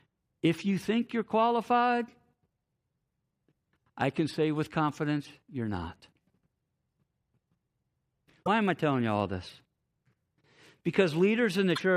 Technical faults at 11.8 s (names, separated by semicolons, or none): damaged data in a compressed stream